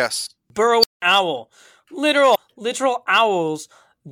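Speech, with two faults. At 0.81 s there's an unstable filter: a recursive filter with bad coefficients starts feeding on itself, and a squeal around 5 kHz balloons to a very loud level in about 25 ms, clips, then the arithmetic overflows and the output drops out for roughly 186 ms until the filter resets, with the whole event ending near 1.02 s. Later, from 2.31 to 2.36 s, there's damaged data in a compressed stream. A stretch of the encoded data is corrupt, so the decoder misreads those frames, loses sync and hunts for the next valid header. What you hear is a brief glitch, about 50 ms long.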